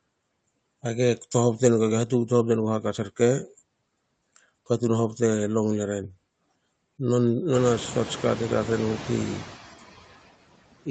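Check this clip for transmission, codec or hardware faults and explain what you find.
One fault stands out: noise suppressor artifacts, present throughout the speech. The suppressor estimates the steady background noise and pulls those frequency bands down by about 17 dB, frame by frame. The room noise therefore dips in the gaps and swells back under speech. This is most noticeable after the background noise jumps by about 20 dB around 7 to 8 s, where the suppressor is working hardest. Nothing reaches above 8 kHz, which fits a wideband call codec.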